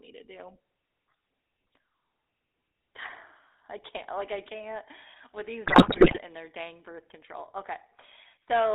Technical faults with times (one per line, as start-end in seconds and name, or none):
0.00-8.74 GSM full-rate codec
5.66-6.20 GSM bit errors